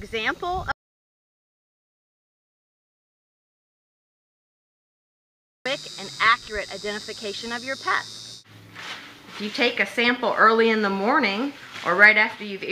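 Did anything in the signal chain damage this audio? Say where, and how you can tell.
Yes. At 0.72 s the sound cuts off abruptly into dead digital silence, with no room tone at all, and returns mid-flow at 5.66 s, so about 4.9 s is missing. This audio dropout to silence likely came from the input stage: a lost device or link while zeros kept being written.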